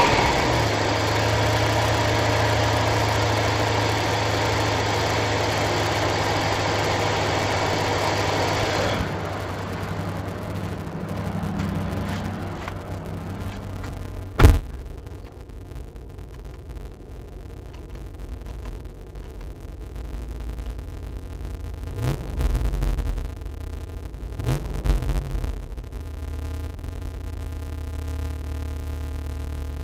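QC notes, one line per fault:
Throughout: interleaved audio read as planar, where alternating left-right samples in 5.33 ms blocks (which fits a 256-sample block) get split into halves per channel, leaving dull, robotic sound buzzing at 188 Hz; spectrograms show 188 Hz harmonic striping, waveforms a blocky periodic pattern.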